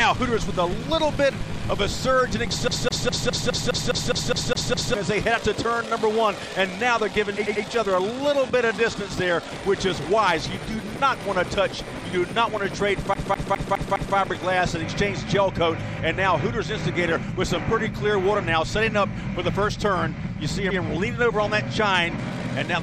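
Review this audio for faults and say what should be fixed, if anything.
The main thing to fix is a CD stuck on one turn, in two places. From 2.68 to 4.94 s the same 0.21 s slice plays eleven times in a row, and from 13.14 to 14.17 s that same length loops five times. Each jump has a tiny mute, giving that quick, even stutter. A scratch is throwing the laser back one track at the same point every rotation, so the loop length stays fixed at about 206 ms.

You've also got repeated frames at 7.45 to 7.64 s and 20.69 to 20.79 s. A 92.9 ms block, which fits a run of four compressed frames, gets played again, twice at the first spot and once at the second. That means those frames were written or sent more than once, so the decoder just replays them, and the audio ends up 185.8 ms and 92.9 ms longer respectively.

To prevent this, re-rip from a clean disc with a secure, error-checking ripper, and verify frame continuity with a checksum before encoding or sending the file.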